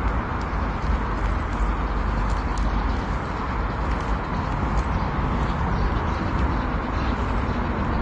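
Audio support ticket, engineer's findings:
Dull, smeared top end throughout. No content above 9.7 kHz. Plainly audible codec damage, with fizzy, warbling texture on sustained and hissy sounds. Likely AAC compression, AAC-LC at a low bitrate, fitting roughly 32 kbps. Encoder drops the high band and starves the remaining bands of quantisation bits.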